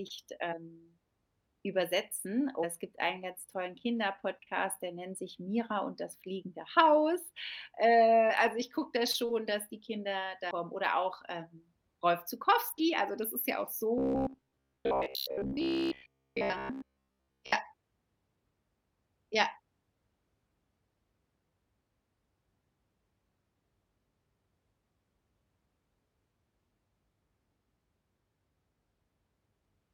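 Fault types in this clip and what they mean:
Damaged data in a compressed stream: Corrupted bytes make the decoder misread frames and lose sync, producing brief glitches at 0.51–0.54 s, 2.63–2.65 s just before "es gibt einen ganz", 8.29–8.31 s just before "also ich gucke da", and 10.50 s. Each lasts roughly 14 to 22 ms. On a spectrogram each shows as a thin vertical smear of broadband energy breaking the speech pattern; the waveform shows a short burst or discontinuity.
Robotic sound from repeated short buffers: From 13.98 to 17.52 s, right after "das ist ja auch", the speech turns into a rigid metallic buzz at 66.7 Hz. That pitch matches a 15 ms fragment played over and over, most likely because audio arrived too seldom and the last buffer was reused while most of the real signal was skipped. The spectrogram shows a fixed comb of harmonics spaced 66.7 Hz apart, and the waveform shows roughly repeating 15 ms cycles.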